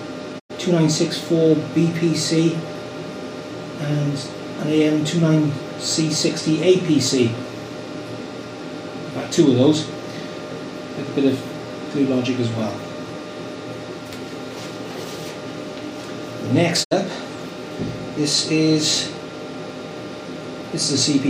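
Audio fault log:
0.38–0.52 s and 16.83–16.93 s, digital broadcast dropout: the sound fades to silence over about 20 ms and returns after a gap of 96 ms in the first hole and 64 ms in the second. The receiver stopped getting decodable frames, through lost signal or failed checksums, and muted rather than output corrupted data. The gap lengths fit three and two lost frames of about 32 ms each. Whatever was broadcast during those holes is gone.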